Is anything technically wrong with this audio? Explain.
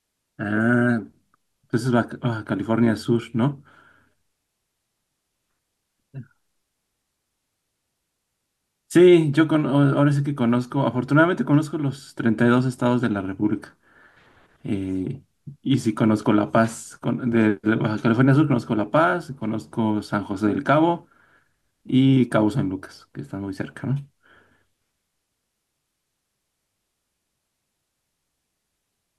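No, nothing technically wrong can be heard in this speech recording. There is no fault to point to anywhere in it.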